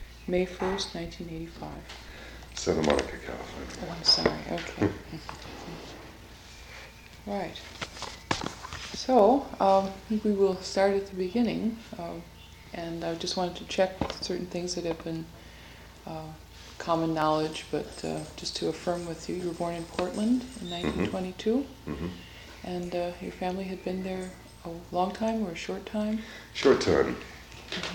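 From 0.51 s to 27.91 s, a click recurs every 0.67 s, about forty in all. These are clock drift buffer slips. Two clocks likely disagree by roughly 500 ppm. The buffer drifts until a short block, around fifteen samples, is dropped or repeated.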